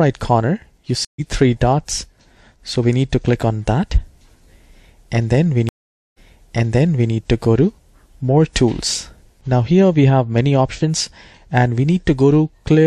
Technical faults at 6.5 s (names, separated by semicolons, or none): stream reconnect